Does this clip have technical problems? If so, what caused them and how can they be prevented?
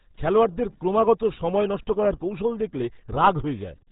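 Yes. The whole clip carries RealAudio 14.4 codec damage, and it's heavy. Nothing gets through above 3.8 kHz, so the speech sounds muffled and gargly, which fits an 8 kbit/s dial-up-era codec squeezing everything into a very narrow band. To prevent it, keep a higher-bitrate or lossless master and never transcode from legacy RealAudio files.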